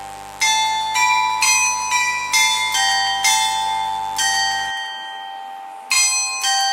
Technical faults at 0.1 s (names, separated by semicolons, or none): mains buzz